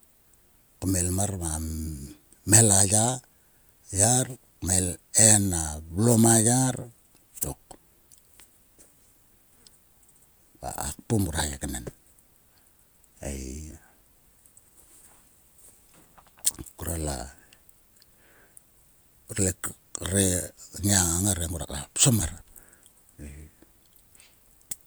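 A speech recording with no technical faults present anywhere in the signal.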